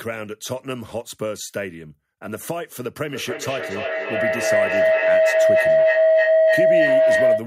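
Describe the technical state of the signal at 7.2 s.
Feedback howl from 3.1 s onward: a microphone-loudspeaker loop gains level each trip, so a tone around 700 Hz, pulsing about every third of a second, grows instead of fading like echo.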